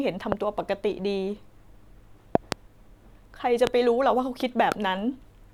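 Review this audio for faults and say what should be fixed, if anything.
Loud pops show up four times. There are single ones at 0.32–0.34 s, 3.67–3.69 s and 4.72–4.74 s, roughly 20 dB over the speech, and a double pop around 25 dB at 2.35–2.54 s. Each is a sudden voltage spike, likely from a plug, switch or static, riding on top while the speech carries on underneath. Secure the cables and connectors, and keep switches and static away from the signal chain while recording.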